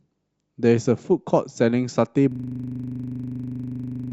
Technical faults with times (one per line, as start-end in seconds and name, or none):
2.32-4.12 system hang loop